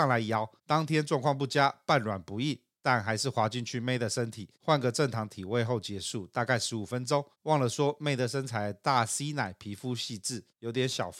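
No technical faults are audible anywhere in the speech recording.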